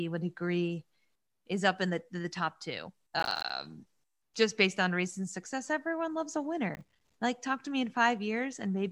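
The processor falls behind and misses a run of buffers only a few milliseconds long, each leaving a hard-edged silent gap. This is processor overload crackle, a gritty tearing from 3.20 to 3.50 s after "the the top two", and from 6.75 to 7.14 s after "success everyone loves a".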